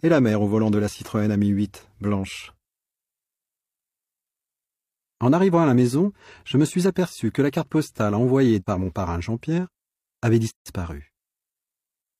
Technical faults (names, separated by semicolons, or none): gap at a join of encoded pieces